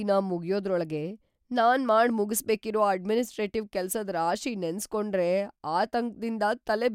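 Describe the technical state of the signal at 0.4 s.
At 0.4 s the speech signal is intact, with no audible fault at that moment.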